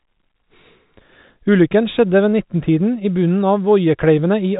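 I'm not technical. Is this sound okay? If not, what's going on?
Yes, nothing is wrong here; it is ordinary telephone-line speech in G.711 telephone coding, which is why it sounds thin, with nothing above about 3.8 kHz.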